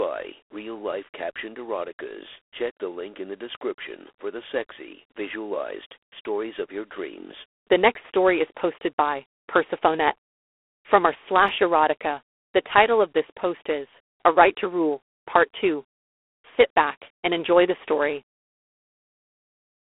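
From start to finish the speech carries G.726 ADPCM damage: a harsh, rasping hiss riding on the speech level, which points to the 24 kbit/s mode, with nothing above 3.8 kHz. A spectrogram shows a hard ceiling there and grainy noise filling the speech bands.

At 11.48 s a block of digital silence about 2.67 ms long drops in, which fits a 128-sample output buffer that was not filled in time. It sounds like a sharp tick. The waveform shows a flat zero line with abrupt edges, and a spectrogram shows a thin vertical stripe.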